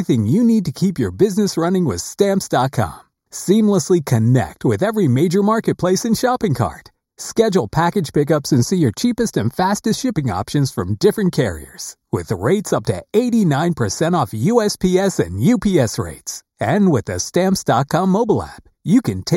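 Throughout the speech, channel delay (comb filtering) makes the tone hollow and phasey: one channel trails the other by roughly a fifth of a millisecond before mono summing, cancelling energy near 3 kHz and higher repeats. A spectrogram shows fixed, evenly spaced dark horizontal bands.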